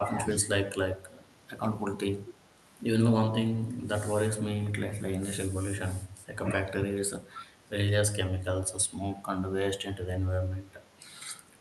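Speech that dips in short patches at 0.03–0.47 s, 2.23–2.41 s, 4.89–5.0 s, 6.26–6.36 s and 7.32–7.45 s. The first two are pulled down hardest, by something like 15 to 20 dB, and the later ones more gently. This is speech suppressed in double talk, likely from an echo canceller that could not separate the talker from far-end echo while both sides spoke, so it turned everything down together.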